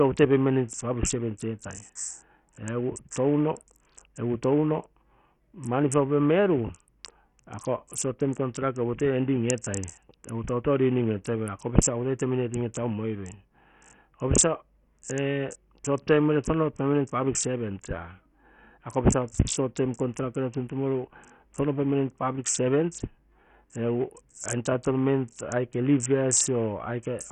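From start to finish the speech sounds gritty and thin, with nothing above 11.6 kHz and a fizzy, flickering top end. This is likely heavy Bluetooth SBC compression at a very starved bitrate, leaving the upper sub-bands with almost no bits and coarsely quantising the rest.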